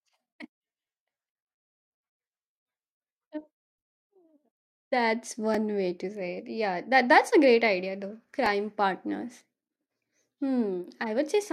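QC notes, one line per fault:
5.54 s and 8.46 s, repeated buffer: a 2.67 ms slice, which fits a 128-sample buffer, plays three times back to back with hard joins, giving a tiny buzzy click just before "way to say it" and just after "a great idea though". No gap or silence, unlike a dropout.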